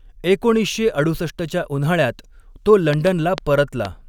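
After "एकोणीसशे अडुसष्टच्या उन्हाळ्यात तो", from 2.93 to 3.86 s, a train of clicks sits over the speech. About four sharp, similar pops arrive unevenly, at 3.3 per second. They stand out roughly 15 dB above the speech. Interference or a faulty connection is the likely cause.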